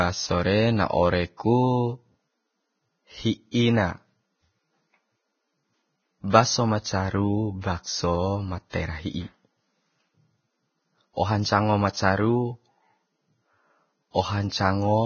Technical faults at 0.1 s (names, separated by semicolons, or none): Vorbis compression